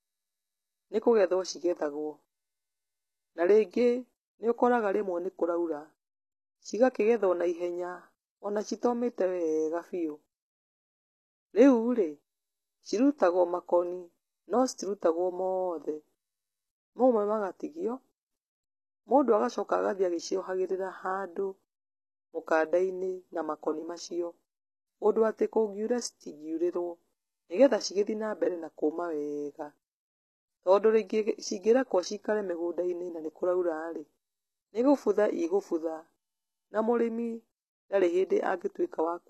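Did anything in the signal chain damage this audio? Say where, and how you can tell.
Yes, at the codec stage, throughout the speech. The treble is present but sounds synthetic, with gritty, lispy s sounds, and nothing at all above 12.3 kHz. That is likely HE-AAC compression at a rate that fits about 16 kbps, rebuilding highs by band replication rather than simply low-passing them.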